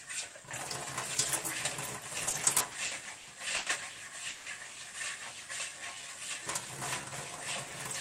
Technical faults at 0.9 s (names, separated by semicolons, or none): none